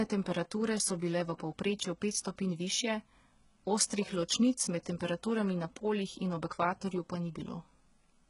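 From start to finish the speech carries heavy codec damage. The top end sounds fake, and nothing comes through above about 11.1 kHz. The s sounds come out gritty and lispy, with a metallic sheen. That's most likely HE-AAC compression at a very low bitrate, somewhere around 12 kbps. The treble isn't the real signal but lower bands copied upward, so the harmonics don't line up with what's underneath.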